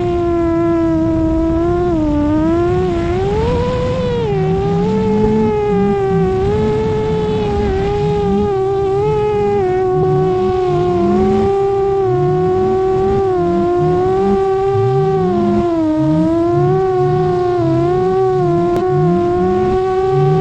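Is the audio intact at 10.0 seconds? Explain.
No. From 9.99 to 10.04 s there is damaged data in the compressed stream: corrupted bytes cause the decoder to misread the affected frames, lose sync and hunt for the next valid frame header. The result is a brief chirp or blip of about 50 ms.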